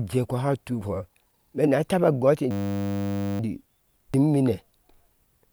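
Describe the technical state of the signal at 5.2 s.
At 5.2 s the signal is intact, with nothing to point to at that moment.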